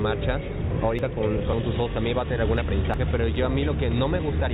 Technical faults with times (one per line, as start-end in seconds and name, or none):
0.99 audio missing between chunks
1.53-1.55 skip ahead
1.62-3.34 jitter buffer speed-up
2.94 audio missing between chunks